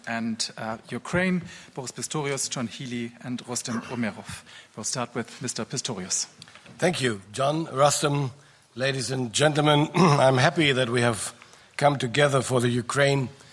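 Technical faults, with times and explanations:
Nothing stood out as a technical problem on listening.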